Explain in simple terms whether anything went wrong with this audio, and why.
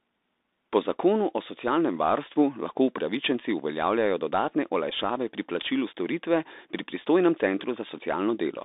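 Throughout the recording the speech sounds boxy and thin, like a cheap phone call, with a gritty hiss under it and s sounds that come out scratchy. This is the Bluetooth CVSD headset codec. The headset crudely squeezes the voice so it fits the wireless link, keeping only roughly 250 Hz to 3.7 kHz. Anything outside that range is gone, and fast, loud high sounds are too quick for the encoder to follow, so they turn rough.

At about 4.90 s there is a brief buzzy tick. This is a Bluetooth headset packet repeated. A few small chunks of audio travelling from the headset were lost, roughly 15 ms in all, which fits about four missing packets. The chip filled the gap by playing the last good chunk again several times. Those rapid repeats create the short mechanical buzz before normal sound resumes.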